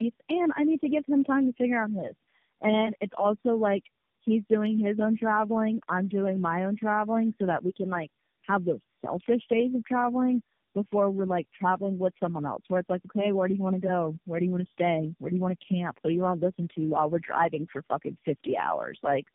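Throughout the speech, tandem speech coding is audible: nothing survives above 3.6 kHz, and the roughness, muffling and warble are heavier than any single narrowband codec produces. That fits about four speech coders in a row, AMR-NB among them, each re-encoding the previous coder's already degraded output.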